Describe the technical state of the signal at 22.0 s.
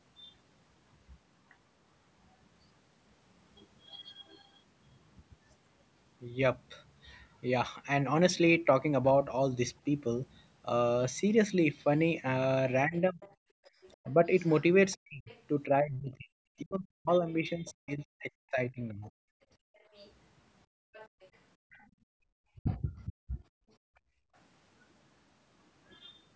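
Background gated by the echo canceller, 19.58 to 22.27 s: while the loudspeaker played, the canceller pulled the microphone down by as much as about 34 dB, so the room sound dips and drops out.

The other side's voice leaking through, 19.76 to 22.73 s: a faint second voice about 25 dB below the speech, likely far-end audio the echo canceller failed to remove.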